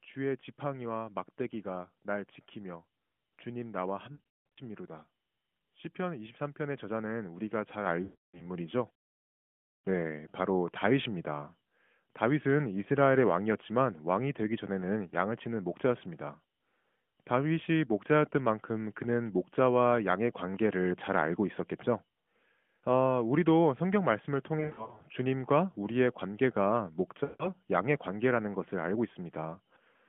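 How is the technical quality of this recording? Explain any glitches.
The recording is narrowband mobile-call speech, limited to roughly 150 Hz to 3.4 kHz with light AMR-NB coding at 12.2 kbps. Two kinds of fault break it up: lost AMR speech frames at four points, and one microphone volume step.

Lost AMR speech frames occur at 4.12–4.58 s, 8.04–8.49 s, 24.60–25.03 s and 27.24–27.53 s. Radio errors corrupted frames, and the decoder concealed each gap by repeating the last good pitch and vocal-tract settings at falling gain. Scattered losses, like those at 4.12 s and 24.60 s, sound like a warbling, smeared stutter. The longest run, about 180 ms near 4.1 s, stretches and fades toward silence. Unlike a plain dropout, the sound thins out gradually rather than cutting off, and comes back briefly rough.

The microphone volume stepped up at 7.86 s, by about 5 dB. The call software judged the input too quiet and raised the device gain in a single jump. 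Voice and background noise get louder together at the same instant. This sets it apart from a compressor or gradual automatic gain control, which would ride the level smoothly. It lands just before the frame loss at 8.04 s, so the louder level carries into that concealed stretch.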